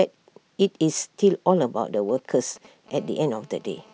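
From 1.94 to 2.90 s, GSM signalling bursts from a nearby 2G phone give galloping ticks and brief 217 Hz buzzes, roughly 25 dB under the speech, seen as clustered vertical stripes.

From 2.95 s to the end, a GSM phone buzz runs continuously at 217 Hz, about 32 dB below the speech, drawing evenly spaced harmonic lines and a regular pulse train in the waveform.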